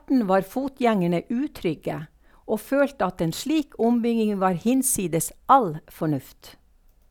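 Nothing goes wrong anywhere in this bit of speech, so there's no fault to point to at any moment.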